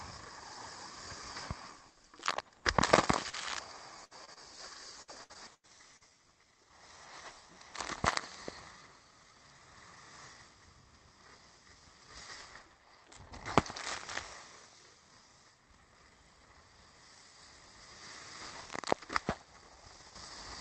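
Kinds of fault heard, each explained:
Lost packet rebuilt from error correction: at 3.15, 3.33 and 3.57 s, 20 ms pieces play from low-bitrate backup copies, so there's no gap, just brief rougher, noisier patches.
Short concealed packet loss: around 3.29, 4.25 and 4.34 s, tiny holes get bridged by extending the previous sound, giving quick smears or wobbles where material briefly drops out.
Burst of packet loss: from 4.05 to 4.13 s, about 60 ms goes missing; the last sound is stretched and faded, then the audio resumes further along.
Repeated packet loss (robotic sound): between 5.02 and 6.11 s, five gaps up to 90 ms long get patched back to back, making things choppy with pieces missing, about a quarter concealed.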